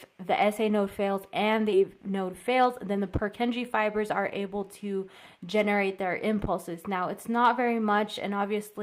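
The audio jumps forward at 1.73–1.75 s. This is a skip ahead: roughly 0.4 s of material never plays, and the two sides are butted together with no silence or concealment filling the join. Because nothing fills the join, it sounds like a sudden splice rather than a dropout, which would leave a hole or a smeared fill. Playback now sits closer to real time. Right after, from 1.83 to 3.57 s, a jitter buffer speed-up runs the sound at about 109% of normal speed. The receiver repeatedly trims out pieces of one or a few pitch periods to shed its excess backlog, about 150 ms in total. The pitch stays where it was while the pace turns hurried. That separates it from a sample-rate or clock mismatch, where speeding up would also raise the pitch. It also differs from the skip, where the loss happens all at once at one audible seam.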